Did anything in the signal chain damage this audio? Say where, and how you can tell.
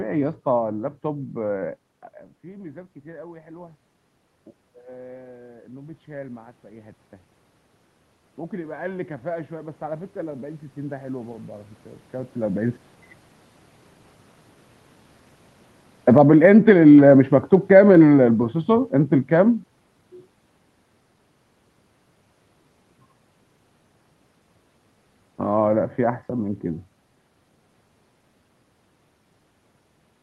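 Yes. In the call processing stage, automatic gain rising appears at 1.07–3.84 s and 5.23–7.03 s (about 4 dB each, after the input fell by about 19 dB), 8.49–12.63 s (about 8 dB), and 16.59–18.21 s (about 4 dB). The room noise swells along with the voice over seconds, so these are gain changes rather than the talker moving, which happens near 1.5 s and 12 s.

Automatic gain falling, also from call processing, runs from 15.96 to 19.73 s. The gain control judged the input too loud, or its background too strong, and pulled it down by about 8 dB. The sound starts loud and then sinks gradually, with the background sinking too, which rules out a talker simply backing away.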